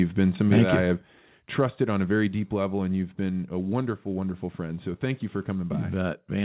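Microphone overload, 0.35 to 0.6 s, just before "thank that you I": the loudest peaks run about 4 dB past the converter's ceiling. This is likely from input gain set too high. A small fraction of samples are flattened, giving a harsh, crackly edge.

Microphone volume stepped down at 1.02 s, after "that you I have", by about 4 dB, and again at 2.28 s, before "deep level and you've", by about 3 dB. Voice and background drop abruptly together, likely because the call software cut the input gain after the overload. The G.711 call path limits everything to 4 kHz.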